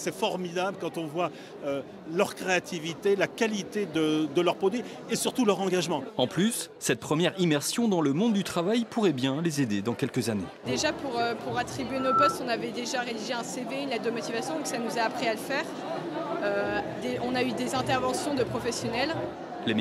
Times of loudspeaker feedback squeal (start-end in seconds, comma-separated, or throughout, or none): 11.89-12.40